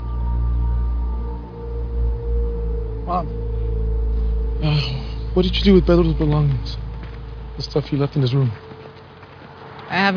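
No technical faults can be heard anywhere in the clip. There is nothing to place on a timeline or explain.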